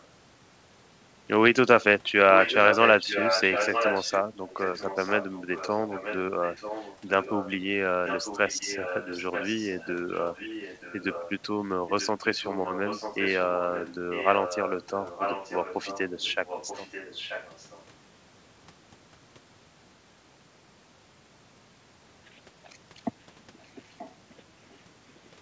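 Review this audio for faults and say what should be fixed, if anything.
A delayed copy of the speech, trailing by about 0.93 s, recurs at 2.38–7.53, 8.06–11.33, 11.87–13.4, 13.73–17.84 and 23.91–24.15 s. It is loudest in the first stretch and faint in the last. This is echo leak, likely a loudspeaker on the other end whose echo canceller let it through. Using a headset there, or an echo canceller that handles a delay of nearly a second, would prevent it.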